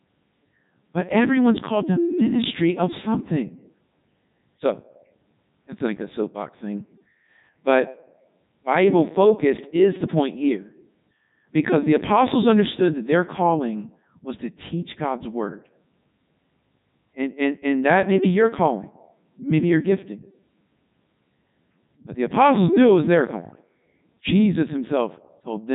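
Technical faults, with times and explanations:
Throughout, Codec 2 vocoder: the speech has passed through a low-rate digital-radio vocoder that keeps only pitch, voicing, energy and a rough spectral envelope. The decoder then rebuilds the speech from sine waves instead of preserving the original waveform. The damage is heavy. The speech sounds robotic and buzzy, nothing is present above 3.8 kHz, and the quality fits the codec's top 3.2 kbit/s mode.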